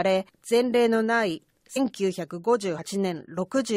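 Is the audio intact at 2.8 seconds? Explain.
No. Between 2.78 and 2.86 s, compressed frames are skipped: whole blocks of the encoded speech never reach the output, either missing from the file or rejected by the decoder as damaged, so the audio jumps forward by roughly 70 ms. Unlike a dropout, no silent gap is inserted; the speech simply resumes further on.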